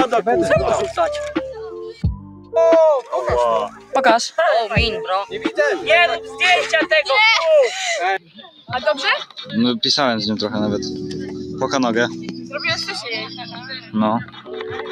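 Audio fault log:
throughout: noise suppressor applied to music or sounds. A speech-oriented noise suppressor stayed active and treated sustained tones, ambience and decays as noise. Its gain swings by roughly 10 dB, so held material sinks while attacks pass, and the sound pumps and thins.
1.93–2.54 s, 3.69–3.94 s, 8.19–8.71 s, 9.25–9.45 s, 13.25–13.95 s, 14.22–14.92 s: sound cut by the noise suppressor. The suppressor classed these passages as noise and pulled them down by up to about 12 to 16 dB below their surroundings, deepest in the 8.19–8.71 s passage. Sustained and fading parts drop away or lose their tails.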